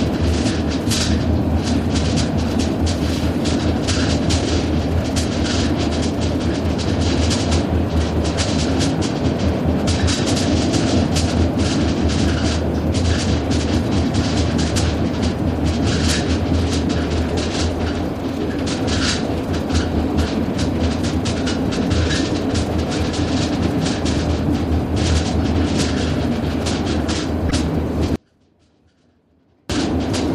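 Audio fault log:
27.49–27.52 s, corrupt frame decoded. A short burst of misplaced energy sounds like a brief chirp or blip. Damaged bits in a single compressed frame were still played. The decoder applied wrong gains and codes, spraying energy across wrong frequencies.
28.16–29.70 s, audio dropout to a faint residue. The sound cuts out abruptly for about 1.54 s. Only a faint trace remains, about 35 dB below normal level. The wanted signal was likely lost while the path after the break stayed live.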